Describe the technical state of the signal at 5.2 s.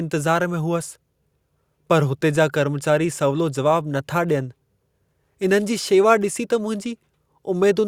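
At 5.2 s the speech signal is intact, with no audible dropout, distortion, or other fault at that point.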